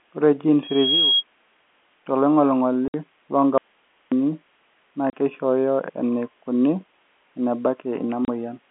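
From 0.63 to 1.24 s a loudspeaker feedback squeal rings at 3.3 kHz, a single tone swelling over roughly a third of a second to sit a few dB above the speech. At 2.88 to 2.94 s, 5.10 to 5.13 s and 8.25 to 8.28 s, packet loss filled with silence punches hard-edged holes of 60, 30 and 30 ms into the speech, which fits 30 ms packets. Between 3.58 and 4.12 s the speech drops to faint hiss about 40 dB down for some 540 ms, likely an audio dropout to a faint residue on a path that stayed live. Throughout, the 200 Hz to 3.4 kHz band of G.711 telephone coding is audible.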